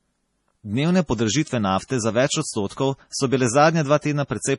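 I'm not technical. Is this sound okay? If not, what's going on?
No. The whole clip has a dull, watery quality typical of heavy MP3 compression, the likely cause. Everything above about 11.2 kHz is gone, so the speech loses its crispness, and the remaining detail flickers in and out because the encoder runs short of data.

There are also three brief pre-echo faults, where a short hiss arrives a split second before a sharp sound: at 1.44 to 1.47 s, at 1.88 to 1.90 s just before "za več", and at 2.67 to 2.70 s between "za več" and "so bile". The encoder spreads its noise across short chunks of sound, so it leaks into the quiet moment just before each attack and softens it.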